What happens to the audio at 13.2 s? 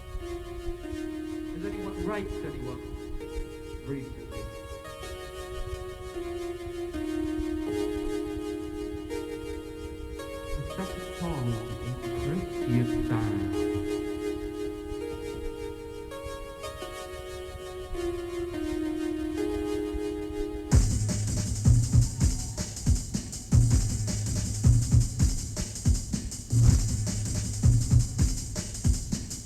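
Nothing goes wrong at 13.2 s; the audio plays through that moment intact, with no dropout, click or other fault.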